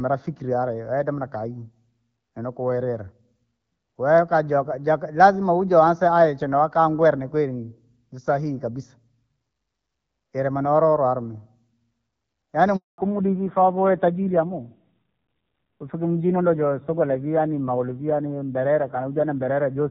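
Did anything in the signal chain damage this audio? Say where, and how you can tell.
Yes. At 12.76 s the network stage interrupts the call with a handover gap. The speech fades out within a few tens of milliseconds and the line stays silent for 220 ms, until 12.98 s. This is the phone moving the call between networks. No speech frames arrived while the new link came up, so whatever was said in that interval is gone.

The codec stage fails right after that, at 12.98 s, with a fallback to narrowband. From that point to the end, nothing above 4 kHz remains. The speech sounds duller and rougher than before. Up to this moment the call ran as HD Voice, AMR-WB at 12.65 kbit/s, with only light coding damage and a clear top end. The new link carries it as narrowband, and the sound points to AMR-NB at about 5.9 kbit/s.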